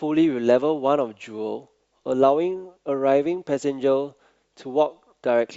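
Listening through the speech recording, nothing stood out as a technical problem at any point.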